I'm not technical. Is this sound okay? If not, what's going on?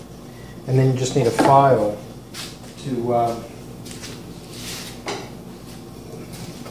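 Yes, this one's fine; nothing in it sounds broken or glitchy, so you can relax about it.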